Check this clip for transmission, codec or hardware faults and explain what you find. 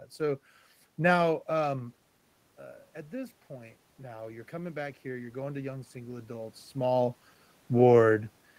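One fault stands out, from the gain control rather than the transmission path or hardware.

Automatic gain rising, from 3.1 s to 7.12 s, just after "uh at": the input level fell by about 11 dB, so the gain control slowly raised its gain by about 9 dB. The voice and the room noise swell together over those four seconds, unlike the talker's own level shifts near 2 s and 6.5 s.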